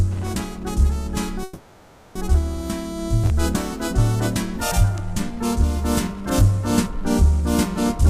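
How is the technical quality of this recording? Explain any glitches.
There's one glitch, a call audio freeze running from about 1.43 to 2.17 s. For roughly 0.72 s the sound stops moving forward and the last bit of audio gets stretched into a buzzy, hissy tail that fades without ever dropping to true silence. The likely cause is packets stalling in transit so the jitter buffer ran dry and the receiver padded the gap. When the audio resumes it picks up right where it left off, nothing lost, just running about 0.72 s later.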